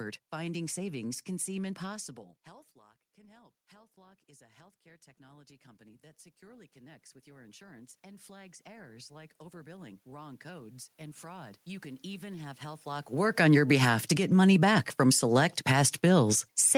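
From 2.76 s, after "savings can seem impossible", automatic gain rising sets in. The level had dropped about 24 dB, and the control slowly adds about 20 dB through 13.44 s. Voice and room noise swell together.

At 13.36 s automatic gain falling follows. The input has grown too loud, or its background noise too strong for the gain, so the control pulls back about 7 dB by 14.18 s. The sound starts loud, then sinks, just before "money back from select".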